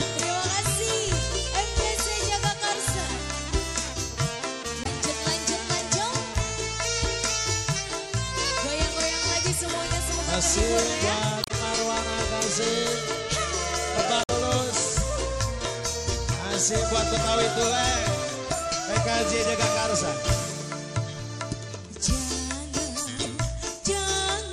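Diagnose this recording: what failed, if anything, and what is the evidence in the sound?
Damaged data in a compressed stream at 4.82–4.87 s, 11.41–11.51 s, 14.23–14.30 s and 23.23–23.26 s, each a short chirp or blip. At the codec stage, corrupted bytes made the decoder misread frames, lose sync and hunt for the next frame header.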